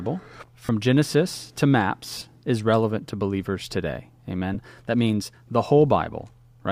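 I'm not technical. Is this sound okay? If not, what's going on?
No. There are three brief buzzy, smeared blips in the speech: at 0.65 to 0.69 s, at 2.18 to 2.21 s just before "is relevant to believers", and a tiny one at 4.54 s right after "relevant to believers today". These are lost LE Audio frames. The wireless Bluetooth link dropped small chunks of sound, and the receiver patched each gap with a noisy copy of what came just before.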